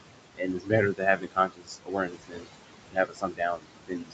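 Noise suppressor artifacts run through the whole thing. The suppressor pulls the room noise, which sits only about 8 dB under the speech, down by about 21 dB frame by frame, so the background pumps between phrases.

There is also speech cut by the noise suppressor. From 0.35 to 0.72 s, 0.93 to 2.48 s, and 2.87 s to the end, it mistakes parts of the speech for noise and ducks them by about 21 to 22 dB. Soft consonants and word endings come out swallowed or faint, for about a third of a second in the first stretch and around one and a half seconds in the second.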